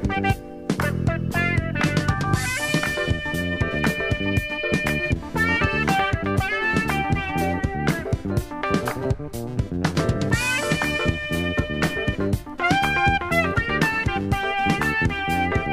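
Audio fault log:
No faults detected.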